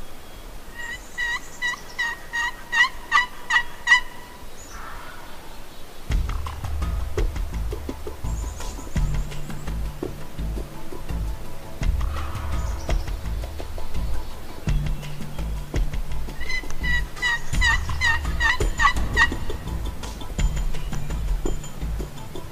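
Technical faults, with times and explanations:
No technical faults can be heard anywhere in the recording.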